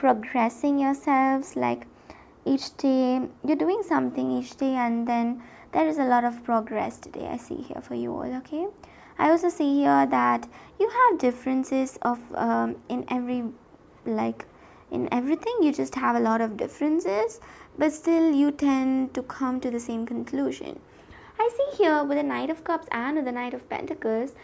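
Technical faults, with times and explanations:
No technical faults can be heard anywhere in the recording; the signal stays steady and intact throughout.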